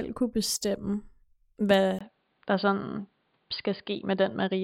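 At 1.99 s, right after "kunne bestemme hvad", the speech drops out for about 20 ms and returns duller and boxier, with nothing above 4.8 kHz, through to the end. This is most likely an input switched to a poorer device, a narrower-band microphone or headset call profile taking over mid-recording. The level stays about the same, but a faint new background noise appears, about 45 dB below the speech. That gap and the changed noise floor set it apart from a plain low-pass filter or codec bandwidth cut.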